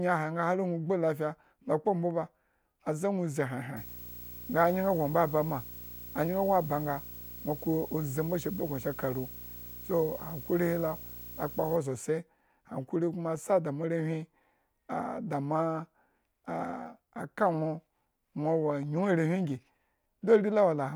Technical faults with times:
3.76-11.76 video or display buzz

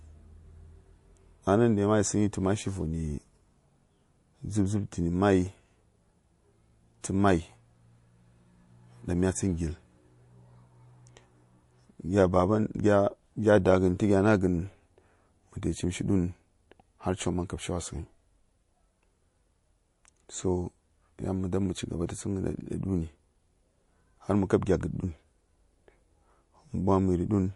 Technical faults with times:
0.00-27.55 MP3 compression
7.01-7.04 pre-echo
22.07-22.09 pre-echo

